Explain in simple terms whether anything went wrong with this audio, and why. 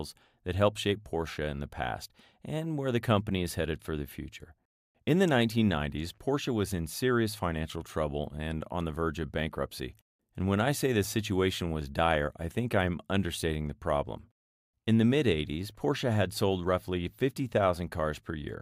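Nothing went wrong; this speech recording has no faults.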